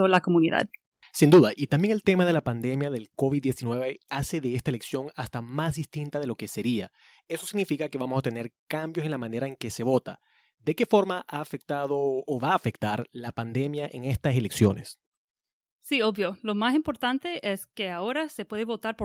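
At 1.02 s the speech and the background behind it drop together by about 4 dB in a single abrupt step. This is a microphone volume stepped down. The likely cause is the call software judging the input too hot and cutting the device's input volume in one move instead of easing it down.

From 1.22 to 1.4 s the loudest syllables take on a harsh, crackling edge. This is microphone overload. The peaks push about 10 dB past the converter's ceiling, and roughly a sixth of the samples in that stretch are flattened at the converter's limit. The likely cause is an input volume set far too high for the level reaching the microphone.

Partway through that distorted stretch, at 1.34 s, the level steps down by about 4 dB again. It drops once more, by about 4 dB, at 2.34 s. Each of these is another one-step cut to the microphone input volume. Together they make the sound noticeably quieter within just over a second.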